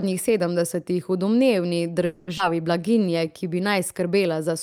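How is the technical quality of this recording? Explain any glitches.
The recording has three related delivery faults, all clustered between 2 and 4 s.

From 2.05 to 2.29 s there is a call audio freeze: the last sound is stretched into a fading 220 ms buzz or hiss before speech resumes with nothing lost. Stalled packets likely emptied the jitter buffer. A spectrogram shows smeared, decaying horizontal bands; the waveform shows a tapering envelope.

At 2.37 to 2.40 s comes a skip ahead: playback jumps forward, dropping roughly 150 ms of speech, and the two sides are spliced almost directly. The audio was dropped in transit or by an overflowing jitter buffer while later audio was already waiting. Expect an abrupt discontinuity in the waveform and a sharp vertical seam in the spectrogram.

From 2.81 to 4.02 s a jitter buffer slow-down plays speech at 90% speed, adding 126 ms by repeating single pitch periods to rebuild reserve. 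Pitch holds but sounds drag. Harmonics stay level in the spectrogram while syllables widen, and the waveform shows repeated, identical cycles.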